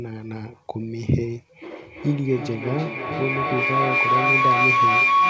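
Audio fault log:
1.89 s to end: feedback howl. A tone near 1 kHz rises out of the speech and never fades. Two devices in one room share the call. Each trip from loudspeaker to microphone returns louder, and the repeats narrow to the pitch the loop favours. The loop's delay is about 300 ms. At its peak it is about 7 dB above the speech. Nothing breaks the loop, so it lasts to the end.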